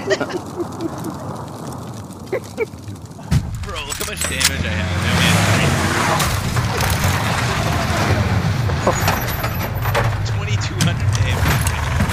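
No technical faults occur at any point in the audio.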